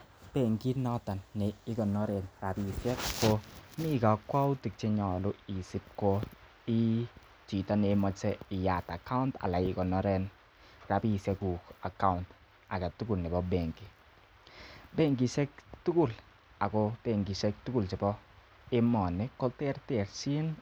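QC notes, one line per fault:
No faults detected.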